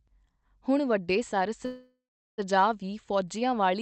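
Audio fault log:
1.65–2.40 s, call audio freeze: the speech halts and its last sound is drawn out as a fading buzz, then 420 ms of silence, before resuming where it stopped. This is likely a jitter buffer underrun from delayed packets, adding 725 ms of delay with nothing lost.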